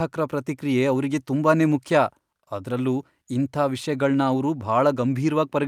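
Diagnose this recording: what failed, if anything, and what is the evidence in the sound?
Nothing failed; no fault is audible anywhere in the recording.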